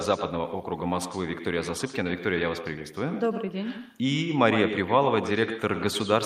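Echo with no canceller runs throughout the speech. The far end is playing the call through a loudspeaker, its microphone picks that up, and nothing cancels it, so each phrase returns about a tenth of a second later as a thinner copy about 9 dB quieter.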